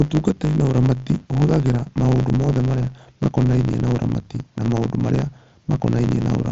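Speech heard through a wideband Bluetooth mSBC headset path, bandwidth ending near 7.7 kHz, carries a block size mismatch (truncated) throughout: a steady 100 Hz buzz from discarded block ends, with speech running 1.09 times fast at unchanged timbre, unlike a sample-rate error.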